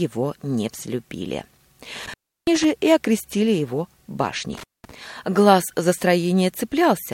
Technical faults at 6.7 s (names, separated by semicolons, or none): none